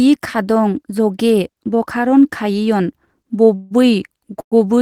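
Call audio freezes at 3.55–3.73 s and 4.41–4.54 s: speech stalls into a fading buzz for 152 ms, then 109 ms (the second dropping to silence for its last 70 ms), and resumes with nothing lost, likely because delayed packets drained the jitter buffer.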